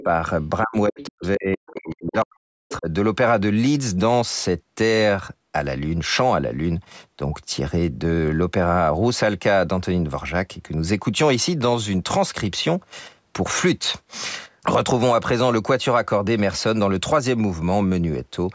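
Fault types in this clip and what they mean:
Other side's voice leaking through: A faint second voice surfaces in short scraps at 0.00, 1.00 to 1.07, 1.68 to 1.77, 2.07 to 2.11 and 2.69 to 2.76 s, about 15 to 25 dB under the main talker. This is likely loudspeaker echo the canceller failed to remove. Unlike a background talker in the room, it appears only as brief fragments clustered in the opening seconds, overlapping the stretch where the main voice is being pushed down.
Speech suppressed in double talk: The main talker dips by about 5 dB at 0.04 s, then from 0.63 to 2.88 s is pushed down, with the deepest drop around 40 dB and roughly one and a half seconds affected in total. The likely cause is the echo canceller turning everything down while both sides spoke. Unlike network dropouts, these losses coincide with the leaking far-end scraps rather than falling randomly through the clip.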